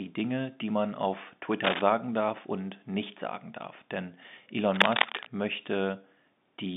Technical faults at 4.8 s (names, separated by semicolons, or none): cable scratch noise